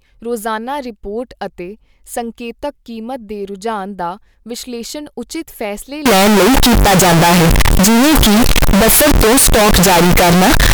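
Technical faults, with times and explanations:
6.06–10.74 s, float read as integer: after "ਦਾ ਵਿਸ਼ਲੇਸ਼ਣ ਉਚਿਤ ਫੈਸਲੇ" speech turns loud and harsh, with noise as loud as speech. The waveform goes nearly square at an almost fixed, high level, likely from 32-bit float samples read as 32-bit integers.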